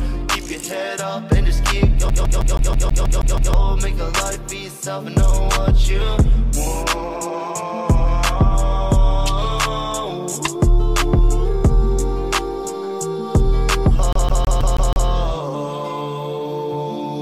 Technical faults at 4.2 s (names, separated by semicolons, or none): none